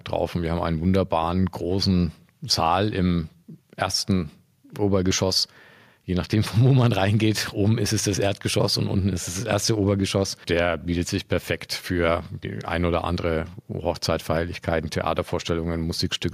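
No technical faults can be heard at any point in this speech recording.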